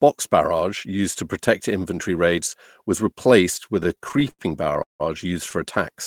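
Repeated stalls (stutter) run from 3.83 s to 5.02 s, starting right after "raids was replaced with". Packets reached the receiver late or too slowly, so its jitter buffer kept draining, sixteen times in this stretch. At each stall the last sound was stretched, and faded in the longer holds, the longest about 171 ms. Around 404 ms, roughly a third of the span, is filler. Nothing is lost, but the speech drags and stammers.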